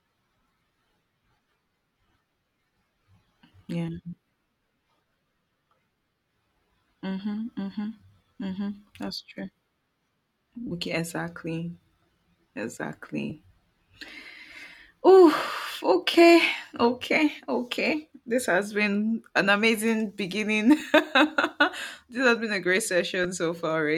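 Lost LE Audio frames at 6.16–6.18 s, 10.67–10.71 s, 13.30 s, 20.80 s and 23.24 s (after "has been a great"): the LC3 decoder fills each 10–40 ms gap by repeating the last spectrum with random signs, leaving a brief noisy smear.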